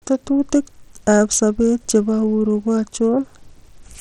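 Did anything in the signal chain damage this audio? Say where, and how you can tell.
Yes. The damage is at the codec stage and runs through the whole speech clip: the top of the spectrum flickers in and out, and a gritty, grainy noise with aliased tones rides on the sound. This is likely Bluetooth SBC compression at a low setting, which fits a bit budget near 80 kbps. With so few bits, the weak upper sub-bands get little or nothing, and the rest are coarsely quantised. On a spectrogram, the treble breaks into patchy blocks and gaps, with hard-edged band boundaries.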